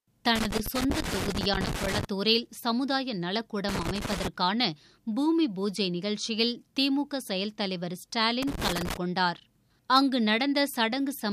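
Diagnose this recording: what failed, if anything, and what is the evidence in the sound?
Irregular bursts of scratching crackle break into the sound from 0.35 to 2.05 s, again from 3.69 to 4.28 s, and once more from 8.43 to 8.97 s. The failure sits in the analogue wiring: this is loose connector crackle. A worn or dirty contact is intermittently opening and closing as the plug shifts, chopping the signal into fragments, and any DC present on the line turns each break into a pop. The result is the uneven, scraping texture heard in each burst.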